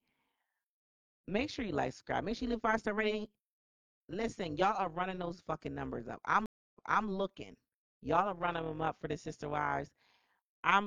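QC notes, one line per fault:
Throughout: overlap-add ripple. The speech was split into windowed frames and rejoined with an overlap that does not sum to constant gain, so level swings by about 11 dB once per frame, around 200 times a second, giving a metallic buzz with extra tones around the voice.
6.46–7.07 s: stream reconnect. Right after "those fucking numbers up" the connection dropped and the audio goes silent for 0.28 s. A fresh decoder then picks up 0.33 s earlier than where it stopped, so a short stretch of speech repeats.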